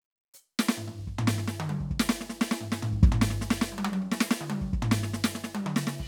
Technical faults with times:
none

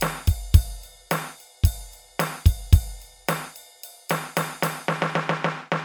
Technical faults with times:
0.00-5.84 generation loss

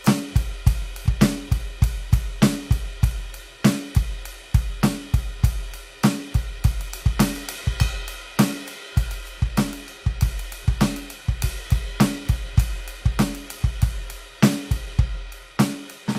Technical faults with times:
1.02-1.07 compressed frames skipped
6.97-7.02 compressed frames skipped

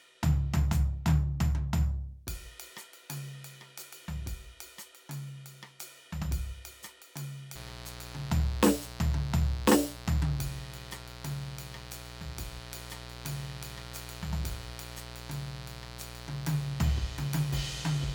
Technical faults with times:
7.55-18.14 mains buzz

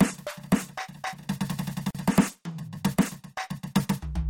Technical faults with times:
1.91-1.95 gap at a join of encoded pieces

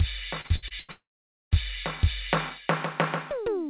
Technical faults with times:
0.41-0.91 repeated packet loss (robotic sound)
0.91-1.54 long network dropout

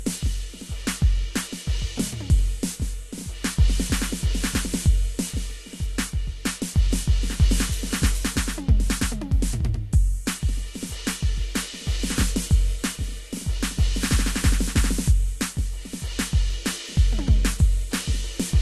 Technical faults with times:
0.00-18.62 transcoding between lossy codecs

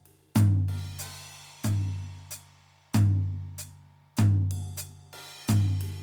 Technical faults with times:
none

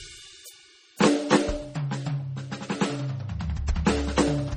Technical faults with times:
0.00-4.56 MP3 compression
3.67 pre-echo

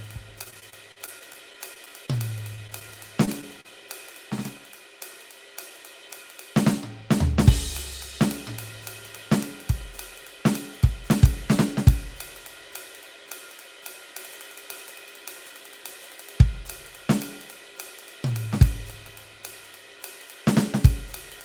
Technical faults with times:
0.43-2.09 repeated packet loss (robotic sound)
2.55-2.96 repeated packet loss (robotic sound)
3.25-3.29 short stall from a late packet
3.61-3.66 short concealed packet loss

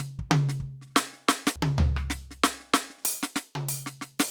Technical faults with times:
1.56 compressed frames skipped

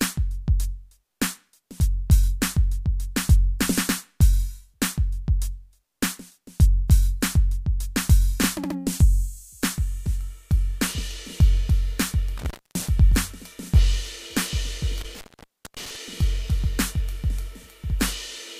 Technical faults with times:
12.38-12.87 intermittent contact
15.01-15.96 intermittent contact

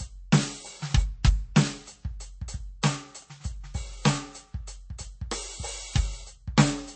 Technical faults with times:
0.00-6.96 MP3 compression

